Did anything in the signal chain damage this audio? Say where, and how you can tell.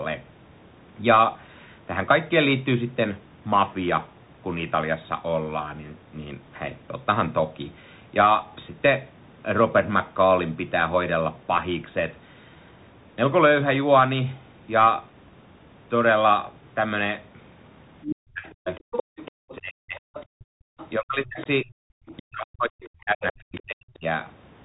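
Yes. The codec stage damaged it throughout. The Bluetooth CVSD headset codec leaves nothing above 3.8 kHz, which fits 64 kbps CVSD. Its one-bit step tracking smears loud high sounds, turns sibilants scratchy and adds a grainy hiss. A spectrogram shows a hard ceiling with speckled noise beneath it.

The call-processing stage let the other side's voice leak through from 18.02 to 22.23 s, about 10 dB below the talker, and briefly at 23.55 to 23.61 s, about 25 dB down. A second voice overlaps the main one, and its separate harmonic stripes show on the spectrogram. The likely cause is loudspeaker echo the canceller missed.

The same stage caused speech suppressed in double talk, from 18.06 to 20.01 s (around one second affected) and from 20.98 to 24.05 s (around two seconds). The talker drops by up to roughly 40 dB. The waveform envelope shows notches cut out of speech, likely the canceller ducking both voices together.

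The canceller also produced background gated by the echo canceller, from 20.29 to 20.7 s. The room tone falls by about 40 dB for under half a second, then returns. The waveform shows a near-flat gap in the noise floor, and the spectrogram shows a dark vertical band.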